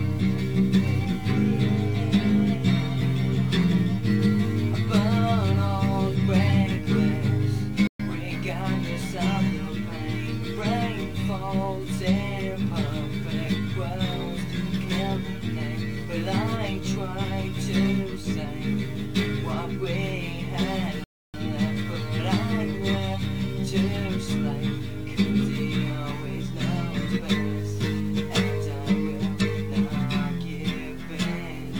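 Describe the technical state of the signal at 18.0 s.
The signal is intact at 18.0 s, with no fault present at that moment.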